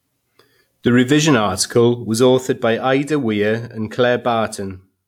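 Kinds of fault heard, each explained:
No technical fault can be heard in this speech recording. Nothing in the sound points to a problem in how it was captured, carried or played back.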